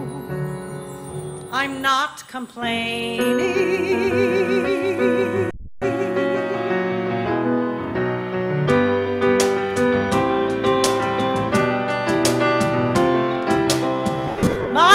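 From 5.54 to 5.68 s and 14.27 to 14.67 s, lost LE Audio frames leave short scattered gaps that the decoder fills by replaying the last spectrum with random signs. Tones become a noisy smear rather than falling silent, which is what separates this from a clean dropout.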